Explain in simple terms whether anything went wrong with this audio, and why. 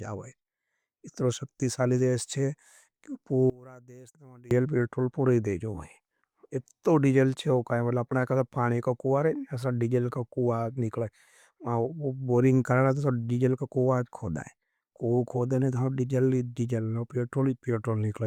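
One channel inverted, from about 3.50 to 4.51 seconds: for roughly a second the speech suddenly drops to a faint trace and then returns at full strength. The likely cause is that one of the two stereo channels had its signal flipped upside down. When both channels are mixed together, the flipped copy cancels the matching part of the other, so the centred voice and its low tones almost disappear, leaving only small differences between the channels.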